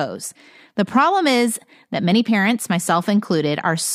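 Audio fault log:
No technical fault can be heard anywhere in this speech recording; the signal stays continuous and intact throughout.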